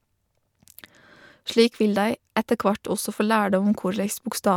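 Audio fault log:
No technical faults can be heard anywhere in this speech recording.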